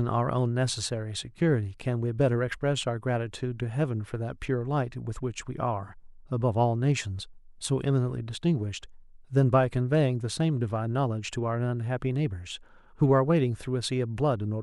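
A speech recording with nothing technically wrong to point at anywhere in it, so there's no fault, time or cause to report.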